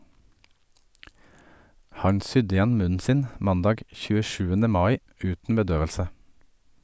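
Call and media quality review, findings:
No faults turned up in this one; the speech comes across with nothing in the call or media path worth flagging.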